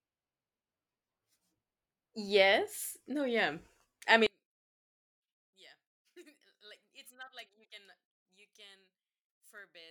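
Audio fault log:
4.27–9.90 s, one channel inverted: right after "yeah I" the speech falls by about 30 dB when heard in mono and stays down until the end, leaving only a faint residue. The likely cause is one stereo channel flipped in polarity. The centred speech is identical in both channels, so summing them cancels it, and what survives is just the small difference between left and right.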